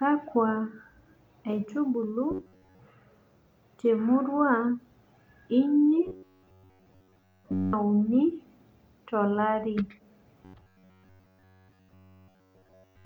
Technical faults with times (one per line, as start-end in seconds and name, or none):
2.31-2.79 robotic sound from repeated short buffers
6.06-7.74 robotic sound from repeated short buffers
10.45-13.05 robotic sound from repeated short buffers